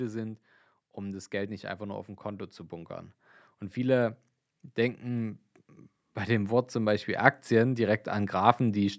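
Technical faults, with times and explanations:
6.26–8.94 s, automatic gain rising: over the last few seconds an automatic gain control, judging the input too quiet, lifts its gain step by step by about 6 dB, so the speech and the background noise beneath it swell together rather than the talker growing louder alone. On a waveform the envelope widens steadily toward the end; on a spectrogram every band brightens at once, including the noise floor, up to the 8 kHz ceiling set by the call's microphone processing.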